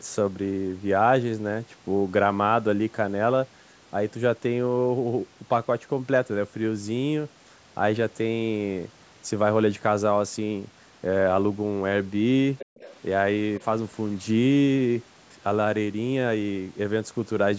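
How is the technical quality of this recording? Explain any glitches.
There are two related glitches, both bunched up between about 12.6 and 13.6 seconds, and both come from the echo handling on a speakerphone-style call. The call microphone processing shows up as a ceiling on the audio, with nothing above 8 kHz.

From 12.58 to 12.95 s, and again briefly from 13.57 to 13.64 s, a second, fainter voice sits under the main talker. That's the other side's voice leaking through, likely because the loudspeaker playing the far end reached the microphone and the echo canceller didn't fully subtract it. The first scrap is around 15 dB below the talker. The second is much fainter, about 30 dB down.

Inside that first leak, from 12.7 to 12.76 s, the room sound suddenly drops away. That's the background gated by the echo canceller. It heard loudspeaker energy and clamped the microphone down hard, by about 40 dB at the deepest point, then let go. 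The whole dip is well under a tenth of a second, so it reads as a quick hole in the background rather than a clean pause.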